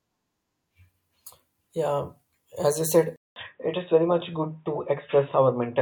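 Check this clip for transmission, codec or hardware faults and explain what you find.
One fault is present. At 3.16 s, right after "you said", the sound goes silent for 200 ms, then continues duller and boxier, with nothing above 3.8 kHz, at a similar level, over faint new background noise roughly 50 dB down. The likely cause is an input switched to a poorer device, whose narrower passband strips the highs. A spectrogram shows the upper band ending abruptly at the gap. The waveform shows a flat 200 ms stretch.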